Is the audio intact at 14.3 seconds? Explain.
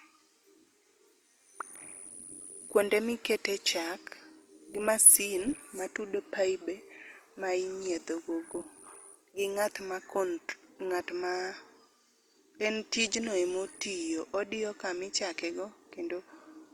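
No. At 14.3 seconds, as through the whole speech clip, the sound carries plainly audible damage, likely from Opus compression in its CELT music mode, at a rate that fits roughly 24 kbps. Short of bits, the encoder fills bands by copying lower ones or adding noise, so speech turns grainy and rough rather than swirly. A spectrogram shows full bandwidth without gaps, but upper bands look smeared and noise-like, and harmonics lose their clean lines.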